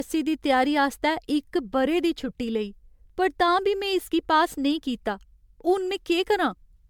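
Throughout, the speech sounds swirly, smeared and hollow, with blurred consonant attacks, worse than a 128 kbit/s MP3 would usually give. This is generation loss, likely from about seven successive MP3 encodes, each re-quantising on a shifted frame grid so that noise and spectral holes accumulate.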